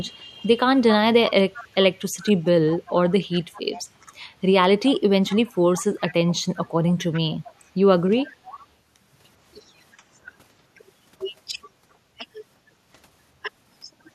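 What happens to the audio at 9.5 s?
Nothing goes wrong at 9.5 s; the speech runs through that moment intact, with no dropout, click or other fault.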